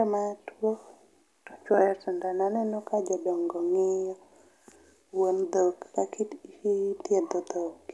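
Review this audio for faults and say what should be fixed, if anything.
No faults; nothing needs fixing.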